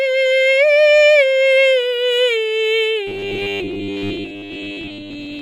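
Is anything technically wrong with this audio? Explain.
Yes. From 3.07 to 5.41 s, new audio likely arrives too seldom, so a 10 ms buffer repeats and replaces most of the music, producing robotic sound from repeated short buffers: a rigid metallic 100 Hz buzz.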